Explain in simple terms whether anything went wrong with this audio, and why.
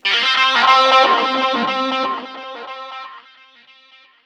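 Nothing went wrong with this recording of sounds: the signal stays intact the whole way through, with nothing interrupting or altering it.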